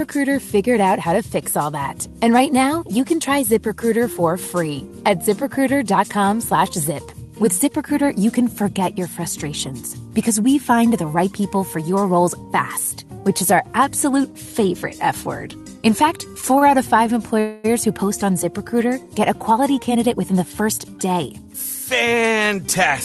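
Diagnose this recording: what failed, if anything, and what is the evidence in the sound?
Network and jitter buffer: a late packet left the buffer empty at 16.58 to 16.63 s, so the receiver held the last sound for about 25 ms until the packet arrived. Nothing is lost, but that sound lingers briefly with a faint buzzy dip. This is a short stall from a late packet.

Network: from 17.40 to 17.66 s the sound stops moving forward and turns into a fading buzz for about 242 ms, with no full silence. It then resumes exactly where it left off. This call audio freeze was likely caused by packets held up in transit, which emptied the jitter buffer.

Jitter buffer: after the freeze the buffer held more audio than it aims for. From 19.50 to 21.55 s it trimmed short pitch-period slices repeatedly, about a fifth of a second in total. The sound runs about 10% fast at unchanged pitch and feels hurried. 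This is a jitter buffer speed-up, heard through the Opus path's roughly 12 kHz bandwidth.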